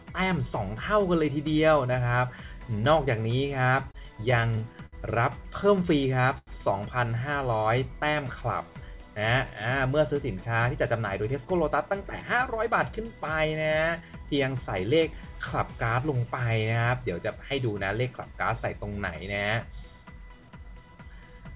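From 3.91 to 4.96 s there's a stretch of repeated stalls, a stutter. Packets kept showing up late, so the jitter buffer ran dry six times in about a second. Each time the receiver stretched out the last bit of sound to cover the hole, 134 ms of fill in all, with the longest gap at 65 ms. Nothing actually goes missing, but about 13% of that span is concealment, so the audio drags and hiccups.

Right after, from 5.85 to 6.22 s, there's a jitter buffer slow-down. The buffer was running low, so the receiver repeated tiny pitch-period-sized slices to rebuild a cushion. It added 35 ms and played at about 93% speed. You hear the sound drawn out at the same pitch, slightly sluggish.

At 6.38 to 6.50 s comes a short stall from a late packet. One packet wasn't there in time, the buffer emptied, and the receiver held the last sound for 89 ms until it arrived, then picked up exactly where it left off. 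The overall delay went up by those 89 ms. It comes across as one sound held a touch too long, with a faint buzzy smear.

A second jitter buffer slow-down runs from 7.48 to 9.04 s, adding 89 ms at about 95% speed. It's the same stretched, unhurried feel, just gentler and spread out longer.

Finally, from 11.01 to 15.23 s there's a jitter buffer speed-up. With more audio queued than the buffer wanted, the receiver kept snipping out short pitch-period chunks to cut latency. The sound runs at about 105% speed, with around a fifth of a second removed. The pitch stays put, but things feel a bit rushed.

Throughout, the sound is band-limited with nothing above 4 kHz, which fits a narrowband call codec.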